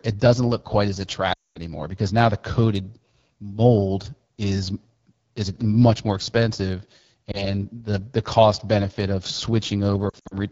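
It's a speech clip with a rough, raspy edge all the way through, the sound of the AMR wideband (HD Voice) codec running at one of its lowest rates, around 8.85 kbit/s. At that rate the vocal tract model is coded with too few bits, so the grit is plainly audible. On top of that there are lost AMR speech frames, where the decoder fills gaps by repeating its last good settings at falling gain. At 1.33 to 1.58 s about 220 ms goes missing in one run, so the sound drops to near silence. At 7.31 s a single 20 ms loss gives a quick dip. From 10.10 to 10.37 s about 140 ms of short scattered losses, none longer than 60 ms, drop it to near silence in short bursts.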